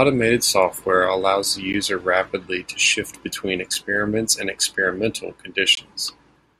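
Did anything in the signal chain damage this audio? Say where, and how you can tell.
Yes. A gap between stream segments at 1.73 s, 3.74 s and 5.75 to 5.77 s: mismatched timestamps at the 2-second segment boundaries leave hard-edged silent holes during playback.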